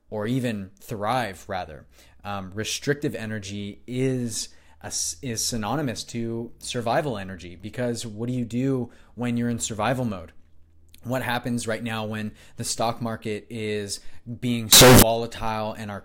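From 14.73 to 15.03 s the speech turns into a loud, harsh, near-square buzz; this is likely float read as integer, 32-bit float samples decoded as 32-bit integers.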